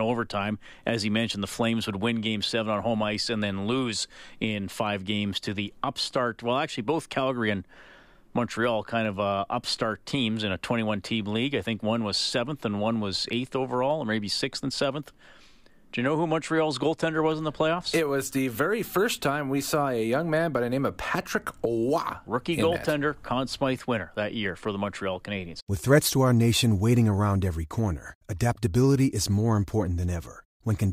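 A speech recording carries a soft, even rattle of faint ticks from 0.14 s to 30.92 s, roughly twenty per second, most audible on louder stretches and absent in pauses. These are likely clock slip clicks: two unsynchronised clocks differing by around 400 ppm, forcing a single sample to be dropped or repeated about every 0.05 s.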